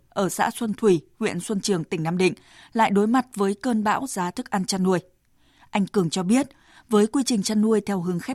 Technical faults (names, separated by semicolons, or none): none